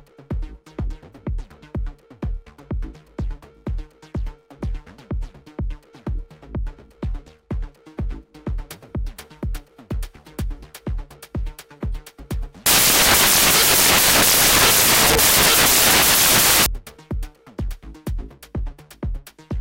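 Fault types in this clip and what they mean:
Samples built from the wrong bytes: the reader misassembles each sample's bytes, off by one byte, swapped or misaligned, so the rapidly changing low bits land in the high positions. From 12.66 to 16.66 s the audio turns into loud, harsh broadband noise.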